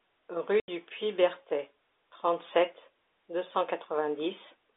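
At 0.6 s, a run of packets never reached the receiver, which played silence in their place, a case of packet loss filled with silence. The speech drops out for 80 ms, which fits four 20 ms packets, and the hole has hard edges within the narrowband G.711 telephone sound.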